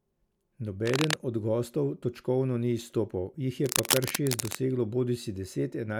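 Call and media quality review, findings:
Cable scratch noise, 0.86–1.15 s before "od gostov točkovno ni" and 3.64–4.58 s after "točkovno ni izstopal jih": rough rustling bursts about as loud as the speech. Likely a worn cable or connector being moved.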